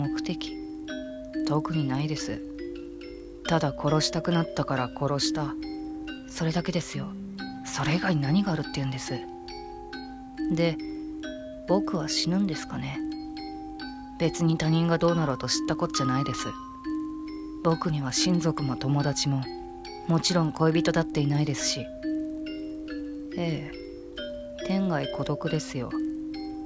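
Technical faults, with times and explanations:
Throughout: resampler restarted on every block. A steady 20 Hz buzz sits under the sound whenever signal is present. Each 50 ms block was converted alone, so edges lacked true neighbouring samples, leaving a small error at every boundary; this fits a 24 kHz-to-16 kHz conversion.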